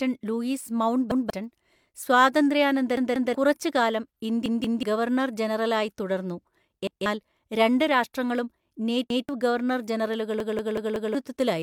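Repeated buffers make the speech stutter at 1.12, 2.97, 4.46, 6.87, 9.10 and 10.40 s. New audio arrived late, so the last piece played again with hard joins. Each piece lasts 0.19 s, which fits an 8192-sample buffer. The stutter at 10.40 s repeats four times.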